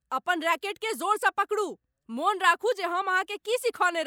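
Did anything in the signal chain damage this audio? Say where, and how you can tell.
No, nothing in this speech recording points to damage at any stage of the signal chain.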